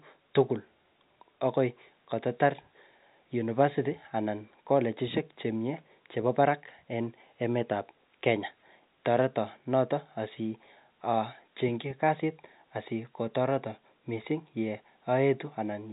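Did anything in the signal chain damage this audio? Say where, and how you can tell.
No, nothing in the signal chain damaged this audio.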